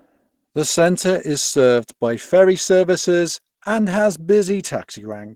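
Opus compression, present from start to finish: the speech sounds plainly muffled and hoarse, with a grainy, noise-filled upper range. This likely comes from the encoder's hybrid speech mode at a low rate, around 16 kbps, filling starved bands with noise instead of detail.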